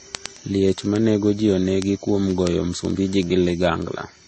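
From the start, the speech carries coding artefacts, with nothing above 8.3 kHz. Two distinct kinds of coding damage are heard together, which points to transcoding between lossy codecs. The likely chain is a low-rate MP3 encode, around 33 kbit/s, re-encoded to Vorbis at a similarly low rate. Vorbis spends its bits on the MP3 artefacts while adding its own, and the lowest band limit in the chain remains.

From 0.15 s to 4.25 s, a steady train of sharp, uneven clicks runs under the speech, roughly every 50 ms, about twenty per second and around seventy in all. These are word clock ticks. A digital link was read by a receiver free-running on its own clock, with a mismatch of roughly 400 parts per million. Each time the two clocks slip past each other, a single sample is dropped or repeated, leaving a tick.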